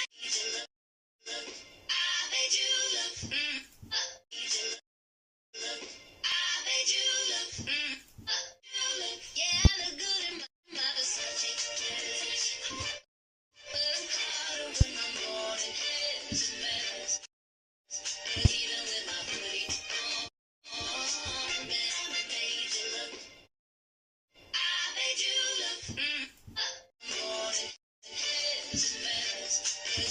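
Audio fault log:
6.32 s, overlap between stream segments: about 16 ms of sound is missing where two segments' time stamps overlap and the player discards the shared stretch, so the waveform jumps forward. Unlike a pop, it is a tiny skip that removes sound rather than adding anything.
9.65 to 9.68 s, 14.81 to 14.84 s, 18.45 to 18.48 s, loud pop: each is a single pop of about 29 ms, around 25 dB above the surrounding sound, likely from a plug, switch, static discharge or driver glitch. The sound continues underneath each pop, which tells it apart from a skip.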